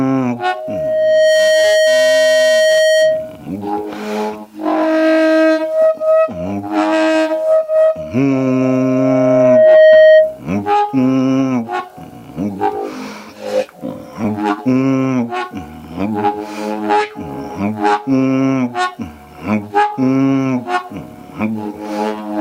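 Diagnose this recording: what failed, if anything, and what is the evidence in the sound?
Loudspeaker feedback squeal, in the analogue acoustic loop between loudspeaker and microphone. A steady 628 Hz tone swells over about a second from 0.40 s to 3.41 s, then returns from 8.32 s to 10.41 s, building more slowly and standing roughly 10 dB above the sound. Loop gain exceeds unity at that frequency.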